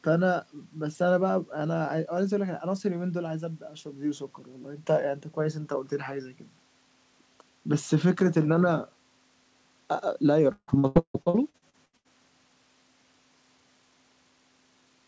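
Repeated packet loss (robotic sound) affects this speech clip from about 10.5 to 12.1 s. Eleven separate dropouts fall within that stretch, the longest lasting 158 ms. In each one the receiver fills the hole by extending the last sound it received, and the next loss arrives before the speech can recover. About half of the span is this patched-over audio, which gives the choppy, robotic quality with pieces missing. Throughout the clip, nothing is heard above 8 kHz, which fits a G.722 call codec at 64 kbps.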